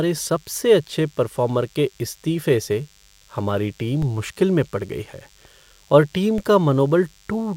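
A thin, steady buzz at 100 Hz with many harmonics sits well beneath the speech throughout. This is DECT cordless phone buzz: radio bursts every 10 ms are rectified by the audio circuit.

At 4.02 s and again at 6.38 s, a low thump sounds while the speech continues. Each is a DC step, a sudden zero-line offset that then decays through a 20 Hz high-pass.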